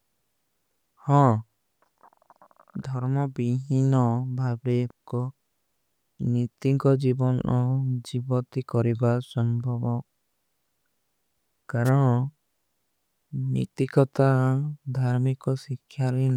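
At 11.85 to 11.90 s a wireless microphone noise hit cuts in: the radio signal briefly fades as reflections cancel, and receiver noise surges as a short burst of static. Unlike a digital dropout, it's a rushing hiss rather than silence.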